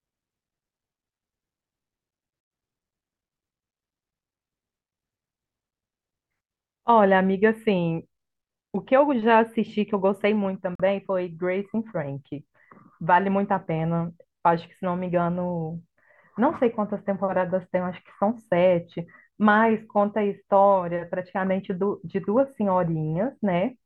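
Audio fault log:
10.75–10.80 s, Bluetooth stall: the speech cuts abruptly to dead silence for 42 ms, a clean gap with no fade in or out, and then resumes. This is likely a wireless stall. Radio interference delayed packets on their way to the headphones, the receiving buffer ran empty before they arrived, and playback halted until the resent audio caught up and refilled it, producing this brief hole in the sound.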